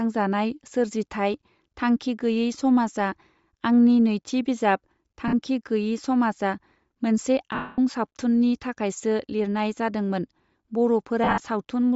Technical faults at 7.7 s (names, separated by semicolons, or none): Bluetooth LC3 compression; lost LE Audio frames